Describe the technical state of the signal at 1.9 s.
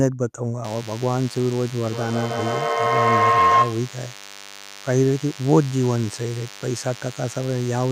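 At 1.9 s two things are going on. A DECT cordless phone buzz has been running since 0.64 s and carries on to the end. A phone or base station nearby fires a radio burst every 10 ms, the audio circuitry rectifies it, and you get a thin, steady 100 Hz buzz stacked with harmonics. It sits around 20 dB below the speech, so it's always there underneath but never dominant.

On top of that, a feedback howl kicked in at 1.83 s and lasts until 3.98 s. Two devices in the same room are on the call, so sound goes from loudspeaker to microphone and back round the loop, picking up gain each trip. Instead of dying away, the repeats narrow onto the frequency the loop favours, somewhere around 1 kHz, with the loop repeating roughly every 150 ms. At its worst it peaks about 5 dB above the speech.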